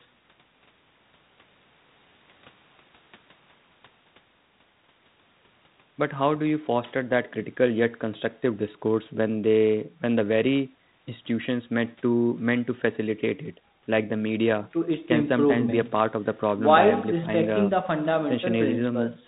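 No technical faults can be heard at any point in the speech.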